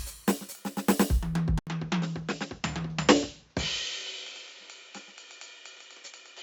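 Input switched to a poorer device at 1.59 s: after an 80 ms gap, the music loses everything above 7.6 kHz, drops about 10 dB, and gains faint background noise, likely from a narrower-band microphone.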